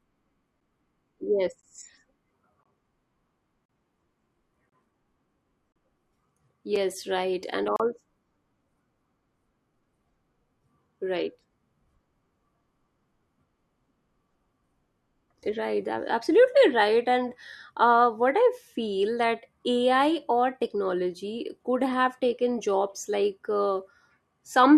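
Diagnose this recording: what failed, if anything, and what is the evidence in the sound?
The failure is at the playback stage: a gap between stream segments, recurring about once per second in this speech. Hard-edged silences occur at 0.60 s, 1.61 s, 2.63–2.66 s, 3.66–3.69 s, 4.69–4.72 s, 5.72–5.76 s, 6.76 s and 7.76–7.80 s, lasting from 5.5 to 38 ms. Successive 1-second segments carry timestamps that don't quite join, so the player inserts silence. Unlike packet loss, nothing is removed. The sound resumes exactly where it stopped, only delayed.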